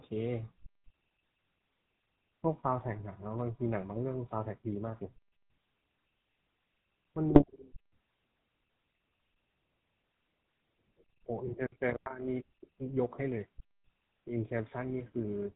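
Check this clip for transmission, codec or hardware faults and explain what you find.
Two faults stand out: GSM full-rate coding throughout, and a short burst of GSM bit errors in the middle.

GSM full-rate codec, throughout the clip. The codec models the vocal tract with a short filter and excites it with pulses on a regular grid, keeping only every third excitation sample, which fits the 13 kbps full-rate scheme. Nothing above 4 kHz survives, so the speech is dull at the top, and the thinned excitation gives it a plainly audible buzzy, gravelly roughness.

GSM bit errors, from 7.29 to 7.44 s. Over about 0.15 s, corrupted bits reach the decoder and scramble the filter, pitch and gain values it rebuilds each frame from. Five 20 ms frames are hit, and the damage points to an error rate of a couple of percent. Each hit frame gets a warped spectrum or a sudden jump in level, so the speech briefly breaks into squawks, pops and gargling before clearing.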